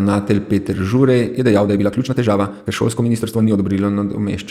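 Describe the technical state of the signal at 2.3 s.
At 2.3 s you're right in the middle of a time-stretched section that runs from 1.28 to 3.66 s. The speech suddenly goes about 1.8 times faster, yet the pitch doesn't rise with it, so it comes across rushed. That's likely a stretch algorithm squeezing the passage to fit a shorter length, throwing away small slices of the waveform to keep pitch steady while cutting duration.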